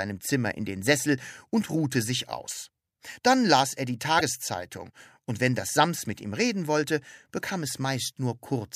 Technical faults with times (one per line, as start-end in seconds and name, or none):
4.17-4.21 damaged data in a compressed stream